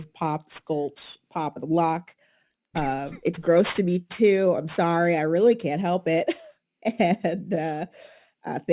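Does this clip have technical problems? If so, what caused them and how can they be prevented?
Yes. Aliasing runs through the whole speech clip. The band stops hard at 4 kHz, which fits a drop from 48 kHz to 8 kHz without a proper low-pass filter first. Energy that lay above 4 kHz folds back below it as false, unrelated tones. Sibilants sound gritty and metallic. The folded content sits roughly 25 dB under the speech. To prevent it, apply a steep anti-aliasing filter below 4 kHz before reducing the sample rate.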